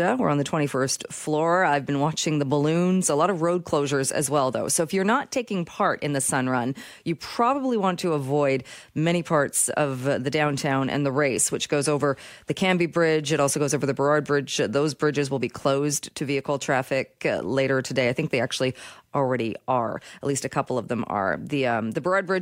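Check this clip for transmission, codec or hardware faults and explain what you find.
Nothing found: no fault is audible anywhere in the speech.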